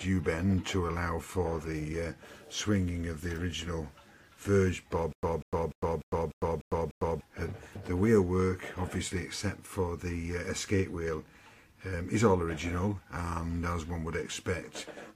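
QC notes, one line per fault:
5.13–7.21 s, stutter with silent gaps. A 194 ms burst repeats seven times with 103 ms of digital silence after each, a 297 ms cycle. A stalled stream likely replayed its last fragment at each retry, then ran empty. The audio due then is lost.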